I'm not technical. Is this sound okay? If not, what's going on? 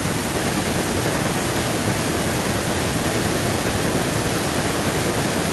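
No. From 0.34 s to the end, an echo leak can be heard. A delayed copy of the speech returns about 1.15 s later, nearly as loud as the original. Likely, the other side's loudspeaker sound reached their microphone and was sent back.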